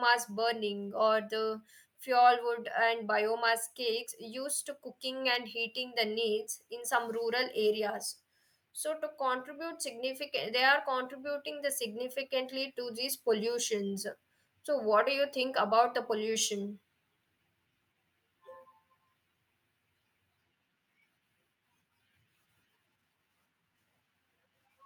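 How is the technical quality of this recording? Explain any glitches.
No glitches or technical faults can be heard anywhere in the recording.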